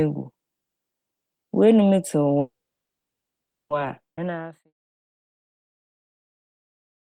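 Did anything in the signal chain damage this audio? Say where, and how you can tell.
Yes. At 2.39 s there's a call audio freeze lasting about 1.3 s, mostly silence, then it resumes where it left off. The likely cause is network packets stalling and starving the jitter buffer.

Then a skip ahead at 4.16–4.19 s: roughly a second of audio vanishes and the two sides butt together. That's network loss or a buffer overflow dropping queued audio.

From 4.24 s to 7.08 s there's a jitter buffer slow-down. Playback runs at 87% speed with unchanged pitch, stretching sounds by repeating pitch periods, adding about 0.38 s.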